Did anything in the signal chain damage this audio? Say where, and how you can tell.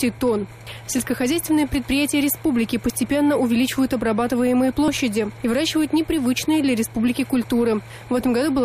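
Yes. Overlap between stream segments at the streaming and playback stage: brief skips at 2.90, 4.88 and 6.86 s, one per 2-second segment join. Adjacent segments' timestamps overlap, so the player trims several milliseconds that weren't truly duplicated, and the waveform jumps.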